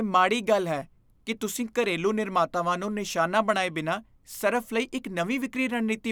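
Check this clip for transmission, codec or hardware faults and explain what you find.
No transmission, codec or hardware fault turns up anywhere in the speech, which keeps a steady, continuous signal throughout.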